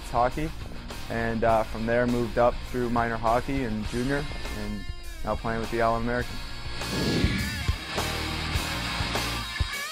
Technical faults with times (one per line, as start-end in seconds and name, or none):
0.66-0.83 DAB burbling
4.09-4.52 DAB burbling